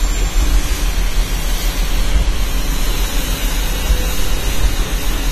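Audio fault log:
Throughout: AAC compression. Nothing remains above 14 kHz, and the codec damage is plainly audible as a dull, smeared sound with a warbling, fizzy texture on sustained and noisy parts. This is likely lossy AAC-LC coding at a bitrate that fits about 32 kbps, where the encoder gives up the top band and coarsely quantises the rest. A simple low-pass filter would cut the top just as cleanly, but it would leave no warble or fizz beneath the cut-off.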